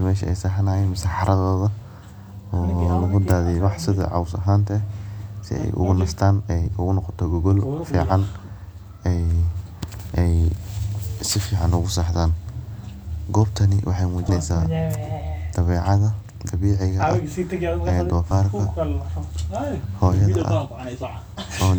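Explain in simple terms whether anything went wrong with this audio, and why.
Whole chunks of the compressed file were lost or rejected by the decoder as damaged, so they never played. This is compressed frames skipped. The speech jumps ahead by a short step at 6.65, 14.28, 18.30, 19.84 and 21.02 seconds, losing roughly 50 to 100 milliseconds each time. Those steps fit frames about 26 ms long.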